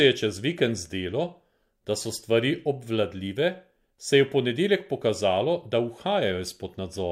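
Nothing in the speech here points to a technical fault, so there's nothing to flag.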